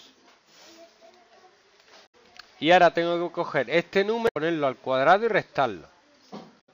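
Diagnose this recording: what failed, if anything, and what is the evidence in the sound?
The codec stage failed, with damaged data in the compressed stream. Short glitches, each about 0.12 s, occur at 2.03–2.15 s, 4.25–4.37 s and 6.57–6.69 s. Corrupted bytes made the decoder misread frames and lose sync until it found the next valid header.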